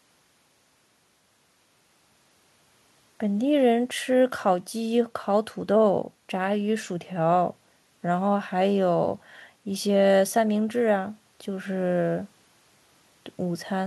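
No technical faults are audible anywhere in this speech.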